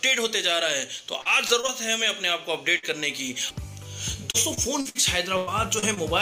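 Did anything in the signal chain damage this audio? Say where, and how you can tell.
Yes. Repeated packet loss (robotic sound) appears from 1.21 to 1.70 s and from 4.31 to 4.97 s, a network-stage fault. Each stretch has four separate holes, the longest 38 ms and then 59 ms, with about 100 ms and 160 ms of real audio missing. The receiver patched each hole by extending the preceding sound, which filled 18% and 25% of those spans. The gaps arrive in quick succession, so the sound turns choppy.

A burst of packet loss hits at 2.78 to 2.85 s and again at 5.37 to 5.49 s, also in the network path. Consecutive packets failed to arrive in time, losing 40 ms and then 100 ms of audio. The decoder carried the last sound forward and faded it as the gap ran on. You hear that as a held tone or fading hiss, then a jump to later material with the middle gone.

Short concealed packet loss occurs at 5.79 to 5.84 s and 5.94 to 5.99 s, removing 40 ms and 20 ms. 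The gaps are short enough that concealment synthesised a brief continuation and cross-faded back into the true signal. Each one registers as a quick smear or wobble rather than an audible dropout, a signature of network loss.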